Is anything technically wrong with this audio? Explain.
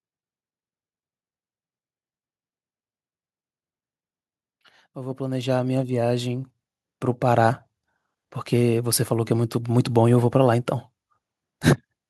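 Yes. Automatic gain rising occurs from 4.94 to 6.53 s. The automatic gain control judged the incoming level too low and stepped its gain up over roughly a second and a half, by about 8 dB in total. Because the control acts on the whole signal rather than the talker alone, the speech and the background noise beneath it swell upward together, so the room tone becomes louder along with the voice across that stretch.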